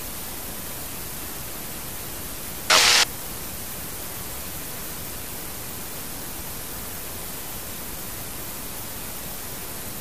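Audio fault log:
throughout, MP2 compression: dull, gurgling and granular, likely from MPEG Layer II coding at a low rate, around 80 kbps, where upper sub-bands lose their bits and switch off. A spectrogram shows a ragged top edge, with high bands flickering on and off in blocks.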